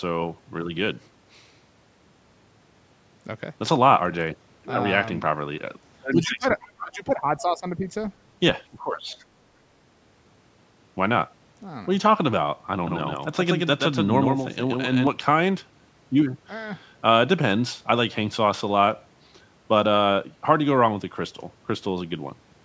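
From 6.13 to 7.86 s the talker's level dips, by as much as about 20 dB, for roughly a second and a half in total. This is speech suppressed in double talk: both ends were likely talking at once, and the echo canceller, unable to tell the near talker from loudspeaker echo, attenuated everything it picked up. The same pattern returns from 8.69 to 9.21 s, shallower at about 15 dB and lasting around half a second.

Inside the first dip, from 6.62 to 6.68 s, a brief, faint scrap of a second voice appears, about 35 dB below the talker. This is the other side's voice leaking through. It is likely residual loudspeaker echo that the canceller failed to subtract from the microphone signal, so a short fragment of the far end survived.

From 12.87 to 15.07 s the audio acquires a hard, dry repeat about 150 ms behind the original and only around 5 dB quieter. This is a doubled audio track. A second copy was likely mixed in via a slower capture path or misaligned edit. 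Because it spans the full band, within the call chain's roughly 8 kHz ceiling, and carries no decay or room colour, it reads as a mechanical echo. It switches on and off abruptly at the section boundaries.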